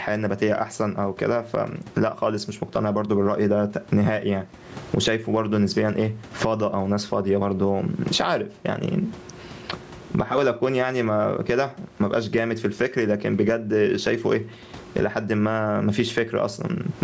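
Gain pumping runs right through the clip. The room noise, sitting about 38 dB under the speech, swells up in every pause and ducks under each loud bit, a swing of roughly 25 dB. That's likely mic gain cranked way too high, with a fast limiter clamping every peak and squashing loud and soft together.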